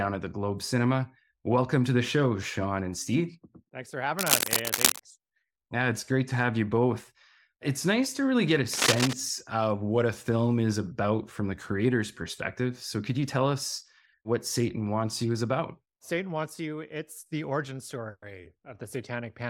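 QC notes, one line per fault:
4.18–5.00 s and 8.73–9.13 s (after "to really get a", before "of what a film"): cable scratch noise, dense uneven scratching bursts about as loud as the speech, likely a worn cable or connector rapidly changing contact resistance; spectrogram shows ragged broadband vertical smears, waveform shows jagged irregular spikes.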